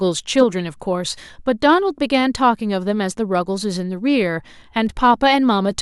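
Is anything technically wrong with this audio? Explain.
Yes. Hard clipping at 0.38 to 0.41 s and 5.10 s: speech peaks, overdriven by about 2 dB and about 0 dB, hit the ceiling and are cut flat, adding brief crackle.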